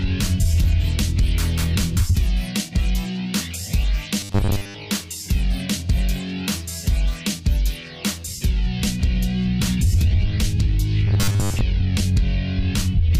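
From 4.20 to 4.75 s and again from 11.08 to 11.62 s, robotic sound from repeated short buffers: a rigid 100 Hz buzz, likely from 10 ms segments looping while most incoming audio is dropped.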